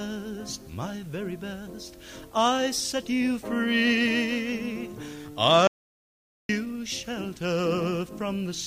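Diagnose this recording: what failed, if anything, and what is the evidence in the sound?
The input side failed, and the recorder kept running. From 5.67 s to 6.49 s the sound drops out to silence for about 0.82 s: an audio dropout to silence, cut abruptly in mid-flow and resumed just as abruptly. The gap is silent with no room tone, which sets it apart from a noise gate, a fade or network concealment. The likely cause is a lost device or link while zeros were written.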